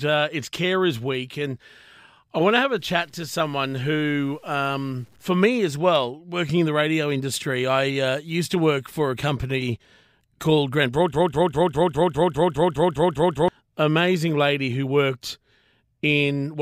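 A speech clip with two separate faults. From 2.79 to 5.26 s, the audio was likely reduced to very few bits by simply truncating the samples, with no dither to smooth the rounding. The grain fits something like a 9-bit word length. This is low bit depth without dither: the error tracks the speech instead of sitting as steady hiss, so the voice picks up a gritty, rasping distortion roughly 40 dB below the signal, and the quietest moments break up or sputter. Later, between 11.14 and 13.48 s, the player or stream likely stalled and kept replaying the last piece it held, producing a broken-record loop. A fragment about 0.2 s long repeats back to back twelve times, giving a rapid stuttering pulse, and whatever speech belonged in that span is missing from the clip.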